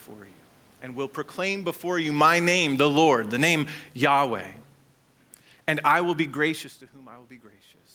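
Between 2.06 and 3.03 s, right after "and will proclaim before", the automatic gain control judged the input too loud or its background noise too strong and pulled its gain down by about 8 dB over roughly a second. This automatic gain falling makes the speech sink steadily in level, and the room noise underneath drops with it. That shared drop is what separates it from the talker moving around 2 s, which changes only the voice. The level settles lower by "the name".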